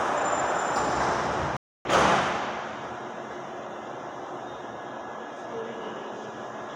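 At 1.57 s the audio cuts to silence for 284 ms, resuming at 1.85 s. This is a playback stall, most likely the player starving for data or its output thread being blocked, leaving an abrupt gap in mid-flow until output recovers.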